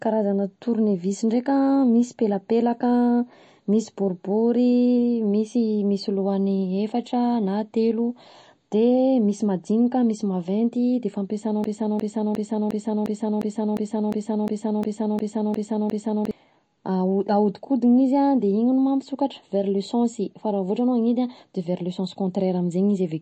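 From start to finish the speech carries plainly audible MP3 compression damage, likely from a low bitrate around 33 kbps. Nothing sounds above 8.3 kHz, and sibilants and transients turn watery and swirly as weak frequency lines drop in and out between frames.

At 11.64 s, just after "maventy de fampiasana", a broken-record loop begins: a 0.35 s fragment repeats back to back 13 times until 16.31 s. The stream likely stalled and resent its last buffer, so the audio for those seconds is lost.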